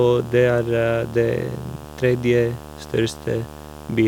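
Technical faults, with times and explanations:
Throughout: video or display buzz, a 75 Hz field-rate buzz with hash above it sits about 20 dB below the speech, set by the picture's refresh rate rather than mains frequency.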